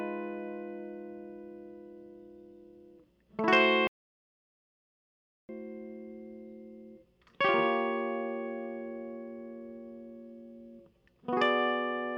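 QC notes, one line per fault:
3.87–5.49 s, audio dropout to silence: the music cuts off mid-flow and returns about 1.6 s later, with silence in between rather than any residual room tone or noise floor, which separates it from a fade or a quiet passage. The likely cause is a lost input whose recorder kept writing silence, so that stretch of music is simply missing.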